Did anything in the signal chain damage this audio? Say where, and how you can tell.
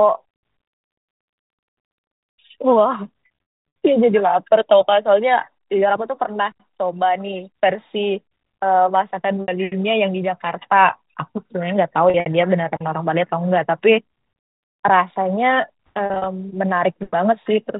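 Yes, at the network stage: packet loss with pitch repetition. Packets went missing around 3.26 s (roughly 340 ms lost, scattered over about 560 ms, longest gap 100 ms), 9.42 s (60 ms), 12.1 s (100 ms over 160 ms) and 16.06 s (120 ms over 200 ms). The receiver filled each gap by repeating the last pitch cycle, so the speech briefly holds a buzzy tone, then fades out before resuming. The G.711 telephone band audibly stops at 4 kHz.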